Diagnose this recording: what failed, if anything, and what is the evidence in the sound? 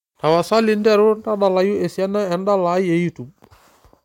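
From 0.26 to 0.87 s the speech picks up a brittle crackle on its loudest moments, a gritty edge that comes and goes with the peaks rather than a steady fuzz. That is hard clipping at the converter or an earlier gain stage: the level was driven about 2 dB past what the stage could pass, so the waveform tops were sliced flat. Those squared-off peaks add high harmonics, heard as the crackle.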